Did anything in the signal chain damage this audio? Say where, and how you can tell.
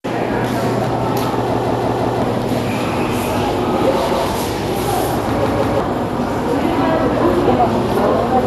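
Yes. MP2 compression shapes the whole clip, from the codec stage. Nothing is present above 12.2 kHz, so the top end sounds dull, and what remains has a gurgling, grainy texture. The likely cause is an MPEG Layer II encoder short of bits, which fits a low rate around 80 kbps. It shuts off the upper sub-bands entirely, lets bands flicker on and off, and quantises the surviving ones coarsely.

A repeated buffer fault at the driver or buffer stage appears three times: 1.54 to 2.22 s, 4.10 to 4.27 s, and 5.46 to 5.80 s. At each point the same 171 ms chunk plays again with a hard join, four extra times in the first, once in the second, and twice in the third. That stutter fits an 8192-sample buffer being replayed when fresh audio arrived late. Roughly 0.7 s, 0.15 s and 0.3 s of new material are lost.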